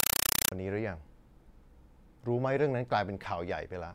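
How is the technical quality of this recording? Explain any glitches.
The opening half second is badly damaged. From 0.00 to 0.52 s, loud, chattering static replaces the speech, pulsing 31.25 times a second. This is a compressed stream played as audio. The pattern points to a Dolby Digital (AC-3) stream passed through as ordinary samples instead of being decoded, so each frame plays as a 5.33 ms burst of noise followed by zero padding.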